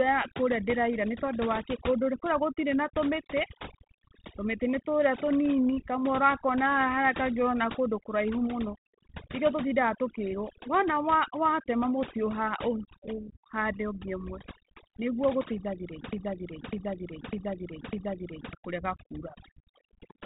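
Overdone noise removal runs through the whole of this 20-second speech clip, carried over a telephone band that stops near 4 kHz and fits 32 kbit/s G.726 ADPCM with only light coding grain. The suppressor was pushed so hard that any frequency band sitting close to its noise estimate is pulled down or switched off, so the background drops and breaks up into twinkling specks, and the softer parts of the voice are stripped away with it. A broken-record loop runs from 16.13 s to 18.53 s: a 0.6 s fragment plays four times back to back, identical each pass, and whatever should have filled those 2.4 seconds never arrives. The likely cause is a stalled player, encoder or stream that kept resending the last chunk it held until fresh audio resumed.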